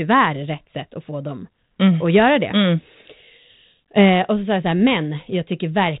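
Nothing in this speech recording stands out as faulty.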